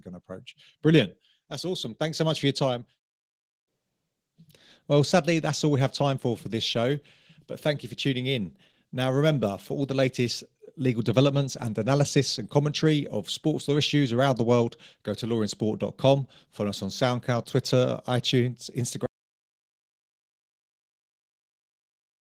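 Speech recorded through Opus voice compression, and the codec damage is plainly audible from start to finish. The voice has the muffled, slightly hoarse, somewhat robotic quality of a hybrid Opus stream, with linear-prediction coding for the lower band and a thin transform layer on top, which fits a bitrate around 16 kbps. Then at 19.06 s there's an audio dropout to silence. The sound cuts out mid-flow into dead silence with no room tone, and it stays that way to the end of the clip. The likely cause is the input going away, through a lost connection, an unplugged device or a stray mute, while the recorder kept writing.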